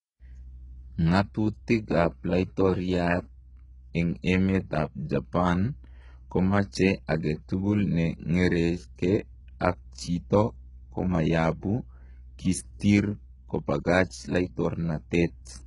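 Throughout, the speech has a gritty, metallic top end and lispy s sounds, likely from HE-AAC compression at a very low bitrate, around 12 kbps. The treble is rebuilt by copying lower bands upward, so its harmonics misalign. A spectrogram shows smeared, repeated patches above the crossover and nothing above 11 kHz.

At 7.07 s there is pre-echo. The block's quantisation noise, sized for a sharp attack, spreads about 16 ms ahead of it, giving a brief hiss and a softened onset. The waveform shows noise before the transient rises, and the spectrogram shows a broadband smear just before it.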